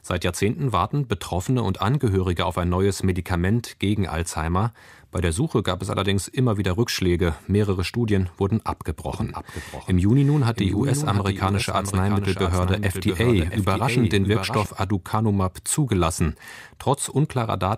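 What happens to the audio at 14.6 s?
At 14.6 s the doubled audio track is just about to end: it cuts off abruptly at 14.66 s, after running from 9.14 s. Throughout that span a second, full-band copy of the speech trails the original by roughly 0.7 s and sits a few dB quieter. It has no decay or room colour, so it sounds like a detached repeat, not an echo. The likely cause is the signal being captured a second time through a slower path.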